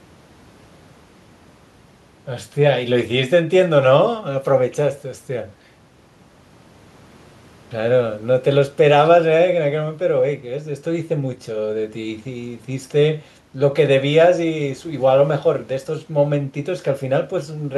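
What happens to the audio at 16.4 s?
Nothing goes wrong at 16.4 s; the speech there carries on intact.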